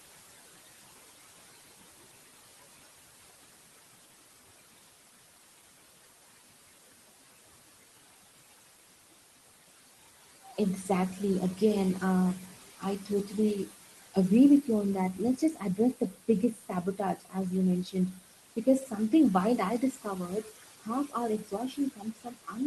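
Noise suppressor artifacts run through the whole recording. The room noise sits about 14 dB below the speech, and the suppressor pulls the bands it judges to be steady noise down by about 16 dB, frame by frame. The background therefore drops away in the gaps and comes back up under the talker.

Speech cut by the noise suppressor appears from about 10.5 s onward, where the suppressor misreads parts of the speech as noise and turns them down with the background. The spans are 10.45 to 11.15 s (dips of up to about 9 dB over roughly a sixth of a second), 12.5 to 13.35 s (up to about 16 dB), and 13.66 to 13.75 s (up to about 18 dB). Next comes 15.14 to 17.36 s, right after "you on", with around 0.7 s affected in total. After that are 17.84 to 19.13 s, just before "wild I", and 19.81 to 20.51 s, right after "wild I". The last is 20.82 to 22.56 s, the most affected, with about a second cut. Most of these reach about 18 dB of attenuation, and the affected syllables and word endings sound swallowed or faint.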